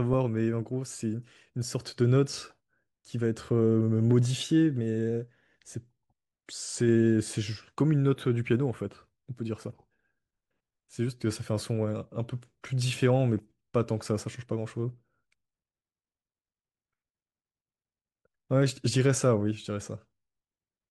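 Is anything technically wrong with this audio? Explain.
No, nothing technically wrong can be heard here.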